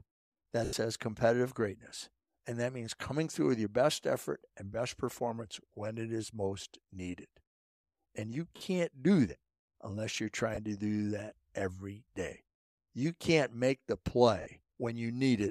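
Four spots of lost LE Audio frames break up the speech. The first is at 0.65 to 0.73 s (80 ms), then 8.56 to 8.61 s (50 ms) just before "do that unless you're", 10.55 to 10.58 s (20 ms) right after that phrase and before "to do that every", and 14.41 to 14.46 s (50 ms) after "can't make the". Each gap fits a run of whole 10 ms frames, as lost LC3 frames would. The decoder reuses the last spectrum with scrambled signs and fades it as the gap goes on, so each gap comes out as a brief noisy smear rather than a clean dropout. The 80 ms gap dies away toward silence before the speech returns.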